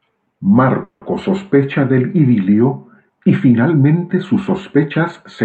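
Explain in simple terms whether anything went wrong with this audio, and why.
A call audio freeze happens at 0.83 to 1.03 s in this speech. For about 0.2 s the sound stalls: the last bit of audio is stretched into a fading buzz that ends in a brief moment of silence. Then the speech picks up exactly where it left off. The likely cause is a delay in the network: data arrived late and the receiver's small waiting store ran dry, so it improvised filler. Nothing is lost, but the rest of the clip now runs about 0.18 s late.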